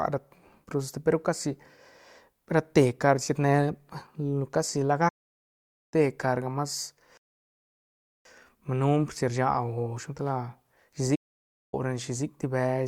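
At 5.08 s the speech halts after "casi la" and stays silent for 0.84 s before resuming with "carga mas". This is a playback stall, likely a player that briefly ran dry or had its output thread blocked. A second stall of 0.57 s follows at 11.15 s.

At 7.17 s, just after "carga mas", a rebuffering stall cuts to silence for about 1.08 s while the player waits for more downloaded audio. It resumes exactly where it stopped, losing nothing but adding time.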